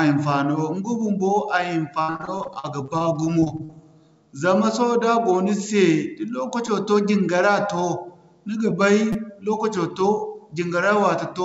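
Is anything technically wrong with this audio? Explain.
Yes. The speech has three kinds of playback fault, and the call path has no content above 8 kHz, which fits a wideband call codec such as G.722.

Repeated packet loss (robotic sound), 2.02 to 3.82 s: audio went missing in 19 separate gaps in quick succession, the longest 63 ms. Each gap was bridged by extending the preceding sound. Together the gaps come to 450 ms of patched audio in place of 360 ms that never arrived, about a quarter of the stretch. The speech sounds choppy, with fragments missing.

Repeated buffer, 6.67 s and 9.13 to 9.15 s: when fresh audio failed to arrive in time, the device replayed the last 5.8 ms chunk, which fits a 256-sample buffer. The first repeat falls between "go ni se da" and "to jingara to", where the chunk plays two extra times. The second plays four extra times. Because the chunks are so short and joined abruptly, each repeat is heard as a brief click or buzz rather than a clear stutter.

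Jitter buffer speed-up, 8.71 to 9.65 s, starting just after "ni ga": too much audio had built up in the receive buffer. The receiver trimmed it back by repeatedly cutting out short pitch-period slices, removing about 50 ms in total. The speech plays at 105% speed without any change in pitch, so it sounds slightly hurried. The second buffer repeat falls inside this stretch.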